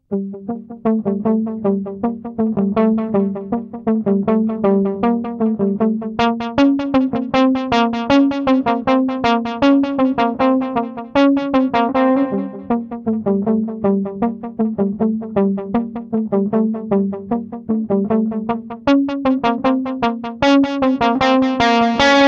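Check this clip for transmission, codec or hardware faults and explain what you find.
No transmission, codec or hardware faults.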